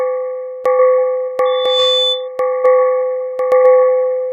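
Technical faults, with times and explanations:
1.45–2.28 s, loudspeaker feedback squeal: the microphone picked up its own loudspeaker with loop gain above one at 3.5 kHz, so that tone swelled over about a third of a second into a squeal roughly as loud as the sound.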